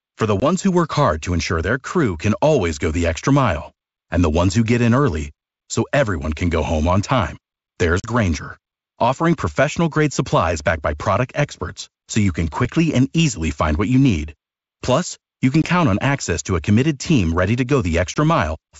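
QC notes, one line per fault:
0.40–0.44, 8.00–8.09, 15.62–15.67 and 18.14–18.18 s, packet loss on an ADPCM call. Each is a hard-edged hole of about 20 ms, or 40 ms at 8.00 s after "home on time there's". At 15.62 s it falls between "you can" and "on access to a". The decoder's adaptive predictor and step size lose track of the sender's. The speech comes back slightly distorted and settles within tens of milliseconds.
12.65 s, block of digital silence. It falls between "experts so you can" and "and easily find what". A gap of about 2.7 ms of silence fits a 128-sample block that was not filled in time. The signal drops to silence and returns with no fade. Being so short, it is heard as a single tick rather than an audible hole. Around it, the G.722 wideband sound runs to 7 kHz.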